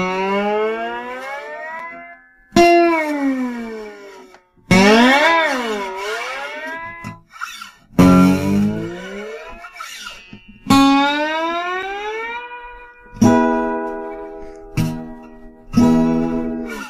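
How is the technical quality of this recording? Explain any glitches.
Two brief glitches break the recording, each a block of digital silence. At 1.79 s and again at 11.83 s, the sound drops out for about 5.8 ms and returns abruptly, with no fade on either side. A gap that short is heard as a tick or dip rather than as silence. The output was fed zeros instead of audio for that moment, and a hole of this length fits a 256-sample buffer that wasn't filled in time.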